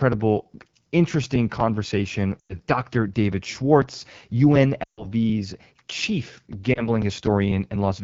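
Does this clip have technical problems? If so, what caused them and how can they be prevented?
Yes. The speech was carried by the AMR wideband (HD Voice) codec at one of its two lowest rates, which fits 8.85 kbit/s. With so few bits for the pulse-driven vocal tract model, the speech sounds plainly rough and raspy throughout. Keeping the call at 12.65 kbit/s or above prevents this.

Lost AMR speech frames: radio errors corrupted frames, and the decoder then stretched the last good pitch and vocal tract settings with falling gain. From 2.40 to 2.55 s and from 4.83 to 5.06 s the sound drops to near silence, which fits runs of about five and seven lost frames. From 6.73 to 6.88 s there is a brief dip, pointing to a single lost frame. Better radio coverage and stronger error protection on the link prevent these gaps.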